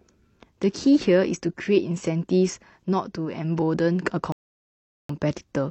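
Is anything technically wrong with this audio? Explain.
Yes. From 4.32 to 5.09 s there's a rebuffering stall: the player starved for data, went silent for about 771 ms, then picked the speech up exactly where it left off.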